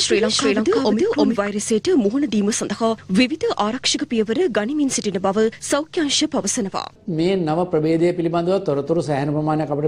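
From the very start until 1.48 s, the audio carries a doubled audio track: a second full-band copy trails the first by roughly 300 ms at about the same level. It is likely caused by the sound being captured again through a slower path, or by an edit holding two copies out of step. Unlike an echo or reverb, the copy has no decay or room colour, and it cuts off abruptly at 1.48 s.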